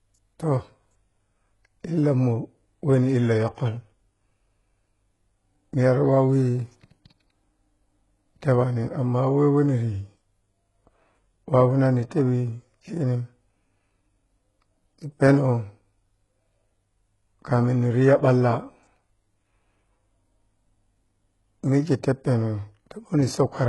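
Throughout the speech, the treble is rebuilt from copies of the lower bands rather than coded directly, likely HE-AAC compression at a rate that fits about 12 kbps. The damage is heavy: s sounds turn gritty and metallic, and nothing reaches above 11.4 kHz.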